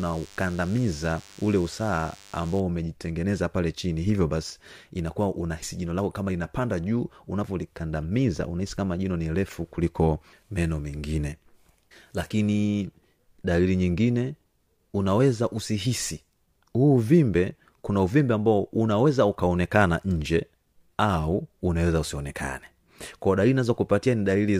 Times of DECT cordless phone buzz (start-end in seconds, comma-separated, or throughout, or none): 0.00-2.60